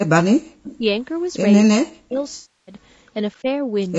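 The whole clip of speech carries low-delay AAC compression, likely AAC-ELD at a bitrate around 32 kbps. The damage is plainly audible. The voice sounds rough and grainy. Noise sits between the harmonics. The short frames this coder uses cannot resolve pitch finely, and at this rate too few bits remain to keep the tone clean. The band stops at 8 kHz, as the call's microphone processing leaves it.

From 0.04 to 0.51 s the speech is suppressed in double talk. The voice sinks by as much as about 40 dB, and around 400 ms of it is affected. It fades and breaks up in pieces. The likely cause is an echo canceller that heard both sides talking at once. It could not tell this talker from its loudspeaker echo, so it turned everything down.

From 0.63 to 0.77 s comes an echo leak. A faint, delayed copy of the voice appears, about 20 dB below the speech and 258 ms behind it. It is a short scrap. Most likely the far side's echo canceller failed to remove all of the sound its microphone picked up from its loudspeaker, and the remainder was sent back.

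More double-talk suppression follows. From 0.78 to 0.85 s there is a brief dip of about 15 dB. From 1.66 to 2.19 s the voice drops by up to about 40 dB over some 300 ms and cuts out in fragments. From 3.42 to 3.46 s a short dip of about 10 dB clips a sliver of sound.

From 2.35 to 2.74 s there is AAC frame loss with concealment. About 320 ms of audio never arrived, which fits some 16 lost frames. The decoder filled the gap from the last good spectrum. It starts as a smeared, phasey patch, then decays toward silence and fades back in.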